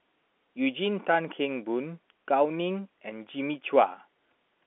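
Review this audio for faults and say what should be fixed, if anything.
Nothing to fix: the speech carries the expected G.711 telephone coding, a narrow line band of roughly 250 Hz to 3.5 kHz with nothing heard above about 3.8 kHz, and no fault anywhere in the clip.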